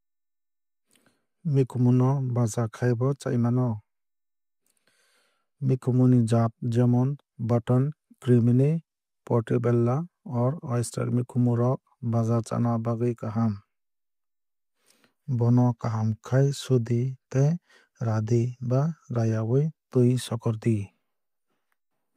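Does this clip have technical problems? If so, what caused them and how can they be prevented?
No, the speech signal holds steady throughout, with no dropouts, distortion or other technical faults to trace back to a cause or guard against.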